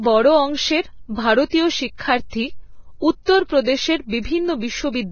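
Throughout, the speech sounds hissy and grainy, with nothing above 6.6 kHz. This is likely heavy Vorbis compression near 18 kbps coarsely quantising the treble. From 3.25 to 3.28 s, a brief hiss precedes a softened attack. This is pre-echo: the codec block's quantisation noise spills about 32 ms ahead into the quiet before the attack.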